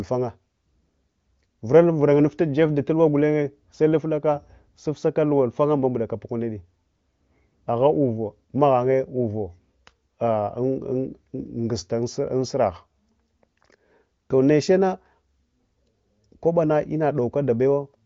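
The speech has no technical faults; its band stops near 7.5 kHz, as an AMR wideband (HD Voice) link does, and any coding trace is faint at most, which fits that codec's high rate of about 23 kbit/s.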